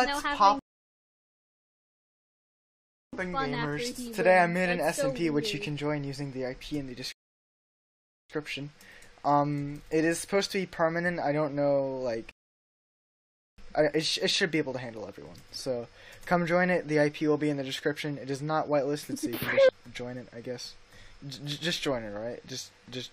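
At 0.59 s the audio drops to silence until 3.13 s, then picks up exactly where it left off. That is a rebuffering stall: playback ran dry and waited for more data, adding about 2.5 s of dead time. Two shorter stalls follow, 7.12 to 8.30 s and 12.31 to 13.58 s, each adding just over a second. On a waveform each appears as a flat line; on a spectrogram, as a blank vertical band with no missing content either side.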